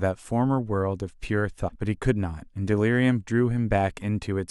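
A brief glitch at 1.67 to 1.70 s is damaged data in a compressed stream: corrupted bytes broke frame sync, so the decoder jumped to the next header.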